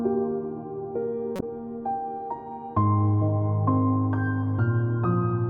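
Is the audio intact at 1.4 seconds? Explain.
No. A corrupt frame decoded between 1.36 and 1.43 s produces a short chirp, squeak, blip or burst of noise peaking around -15 dBFS. Flipped bits left misread gains and codes that the decoder still played, misplacing energy across the spectrum for a span that suggests about two damaged frames.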